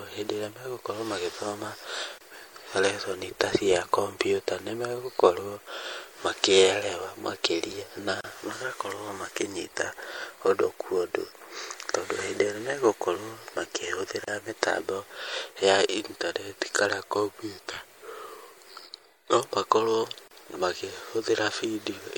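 Throughout this speech recording the treble is plainly damaged, sounding watery and swirly with chirpy s sounds, most likely from MP3 compression at a low bitrate around 64 kbps. A spectrogram would show a hard ceiling on the highs and speckled patches blinking on and off. There are also gaps at joins of encoded pieces, at 2.18 s (about 27 ms) and at 8.21, 14.24 and 20.28 s (about 34 ms each), recurring every 6 s. Each separately encoded piece kept its start-up silence and end padding. On a waveform these appear as sudden flat dropouts in continuous sound, with smeared edges.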